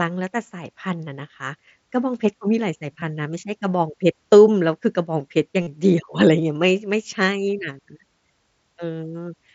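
At 3.00 s and again from 5.62 to 5.67 s, concealed Bluetooth headset packet loss fills gaps of about 15 ms and 45 ms, consistent with two and six lost frames, by repeating recent waveform. The second sounds buzzy and warbles on recovery, showing as periodic cycles and stacked spectrogram harmonics.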